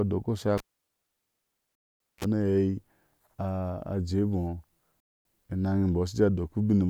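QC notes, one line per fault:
0.58–2.24 s, cable pulled and plugged in: pop, about 1.37 s near-silence, 37 ms burst of 60 Hz mains buzz, then a second pop; waveform shows spikes bracketing a flatline, spectrogram 60 Hz harmonic stripes.
1.75–2.00 s and 5.00–5.25 s, gap between chunks: 250 ms hard-edged silences recurring every 3 s chunk; waveform shows clean rectangular dropouts, spectrogram shows sharp blank vertical bands.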